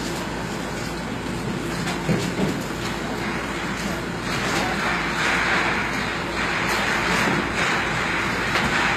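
A recording of sounds, likely passed through HE-AAC compression at a low bitrate around 20 kbps; the rebuilt treble sounds gritty and metallic throughout, with nothing above 14.9 kHz.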